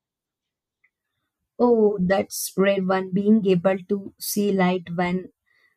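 Chunks out of order at 4.34 s: a 5.8 ms chunk arrives one chunk late and plays after its successor, giving a brief jumbled moment with three hard joins.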